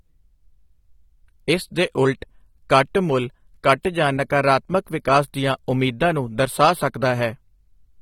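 Lossy AAC compression, likely AAC-LC at a low bitrate, runs through the whole of this speech recording. The encoder has too few bits for all its frequency lines, so it discards and coarsely quantises much of the spectrum; the plainly audible damage fits roughly 32 kbps. Nothing remains above 17 kHz, and the speech sounds dull and smeared, with a warbling, fizzy texture on sustained sounds and sibilants from start to finish.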